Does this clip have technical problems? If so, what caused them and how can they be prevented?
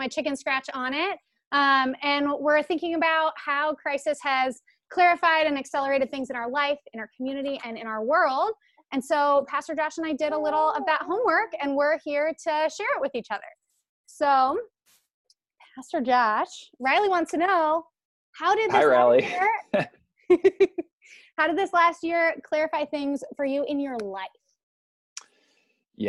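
No, nothing technical stands out in this one, so there's nothing here to fix or guard against.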